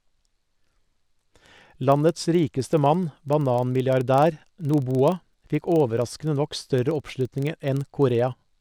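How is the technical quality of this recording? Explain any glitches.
The recording has one fault, present from start to finish: a filter restarted on every block. Throughout the speech, the filtering stage loses its memory at each block boundary and starts again from silence, so every block opens with a small transient. The transients repeat at 23.4 Hz, which fits a 2048-sample block, and are heard as a low buzz or rapid ticking that grows and fades with the loudness of the speech.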